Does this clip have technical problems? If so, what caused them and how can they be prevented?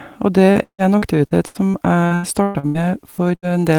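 Yes. From 0.51 to 3.45 s the speech has repeated packet loss (robotic sound): 13 gaps, the longest 155 ms, each filled by extending the preceding sound. Because the holes keep recurring, it sounds choppy with pieces missing rather than like one isolated dropout. A steadier network connection with a larger jitter buffer would prevent it.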